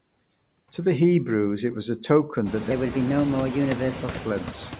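A speech recording in which the background noise ducks away between phrases and swells back under them. These are noise suppressor artifacts. A suppressor is estimating the steady noise and pulling those frequency bands down frame by frame, by about 18 dB. The effect grows more obvious once the room noise climbs by about 17 dB at roughly 2.5 s, to sit only about 12 dB below the speech. The band is narrow, with nothing above 4 kHz, which fits a 64 kbps G.711 A-law call codec. From 2.71 s to 4.20 s the speech turns hurried and higher, running 1.19 times too fast and lifted by about three semitones. Because speed and pitch shift together, this section is at the wrong speed, likely from being played back against a mismatched clock.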